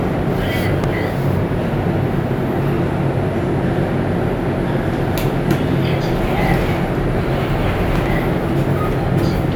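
At 0.84 to 0.91 s and again at 7.96 to 8.08 s, a loud pop sounds as a quick pair of sharp thumps, roughly 10 dB above the surrounding sound, likely from a voltage pulse such as a switch or static discharge. Unlike a dropout, the sound carries on unbroken underneath.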